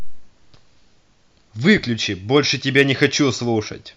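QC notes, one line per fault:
2.37 s and 2.77–3.05 s, hard clipping: speech peaks exceed what a stage in the chain can pass, so their tops are sliced flat. At 2.37 s the overload is about 1 dB and lasts only a moment, giving a brief crackle on the peaks. From 2.77 to 3.05 s it is about 3 dB over, and the squared-off waveform adds high harmonics that put a harsh, gritty edge on the louder sounds.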